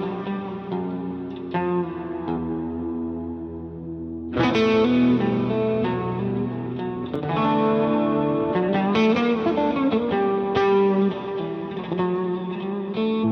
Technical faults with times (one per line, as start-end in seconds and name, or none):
2.33-2.37 damaged data in a compressed stream
4.46-4.52 damaged data in a compressed stream
7.16-7.22 damaged data in a compressed stream
9.85-9.90 damaged data in a compressed stream
13.19-13.24 damaged data in a compressed stream